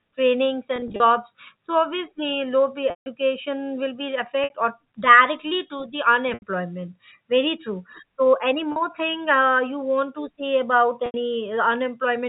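Telephone-band speech, limited to 4 kHz by G.711 coding, has six dropouts from packet loss with pitch repetition: 0.76–1.00 s (about 120 ms lost in bursts up to 40 ms), 2.90 s after "low pay" (160 ms, fading toward silence), 4.44 s after "will be" (60 ms), 6.34 s (80 ms), 8.72 s between "true so any" and "thing uh you want" (40 ms), and 11.06 s (80 ms). Each gap is bridged by a repeated pitch cycle, the short ones sounding briefly held and buzzy, and the gap lengths fit 20 ms packets.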